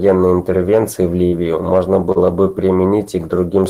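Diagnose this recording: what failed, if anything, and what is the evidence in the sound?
The network stage failed twice in this speech clip. From 1.27 to 1.35 s there is a burst of packet loss. The receiver carried the last sound forward for about 45 ms, letting it fade to a held buzz or hiss, and then the speech picks up about 40 ms further on with that stretch missing. A dropout from a driver or buffer would leave silence or a click instead of this decaying continuation followed by a skip.

From 2.12 to 2.18 s a short concealed packet loss shows as a brief smear rather than a held tone. About 40 ms never arrived in time. The decoder filled roughly 35 ms by extending the preceding pitch or noise and blended it back into the real audio, so only a quick wobble is heard. The gap is as short as the earlier one, but the fill is briefer and smoothed over rather than left to fade out.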